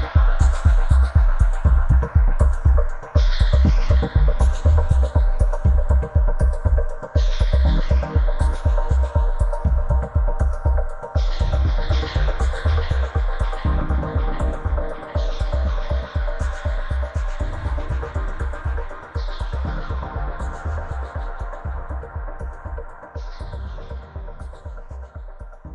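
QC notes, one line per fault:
No faults heard anywhere in this clip.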